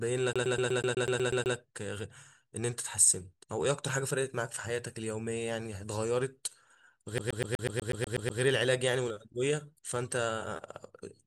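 A speech clip with a CD stuck on one turn twice, from 0.33 to 1.56 s and again from 7.18 to 8.41 s. Each time, the same 123 ms sliver repeats ten times with a brief mute at every jump, as the laser is thrown back a track by a scratch. Unlike an irregular network or buffer stutter, the repeats are perfectly even in length and content, giving the rapid, mechanical rhythm of a skipping disc.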